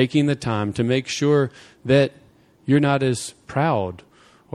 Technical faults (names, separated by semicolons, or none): none